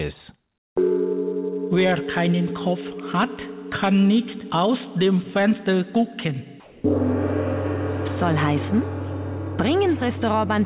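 From 6.6 to 6.84 s, the background becomes a flat, featureless hiss about 3 dB quieter. This is likely comfort noise in place of the background.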